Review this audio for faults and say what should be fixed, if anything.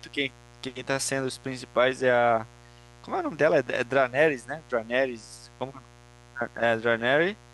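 Mains buzz runs through the entire clip, about 25 dB below the speech. Sharp switching spikes riding on the 60 Hz supply, twice per cycle, produce a ladder of harmonics reaching several kilohertz, heard as a steady, raspy edge under the voice. Fixing it means keeping dimmers and rectifying supplies off the recording circuit and using properly shielded, balanced cabling.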